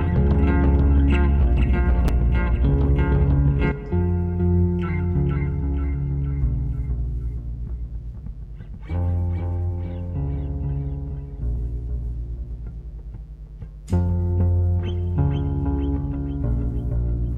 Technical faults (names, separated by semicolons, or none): mains buzz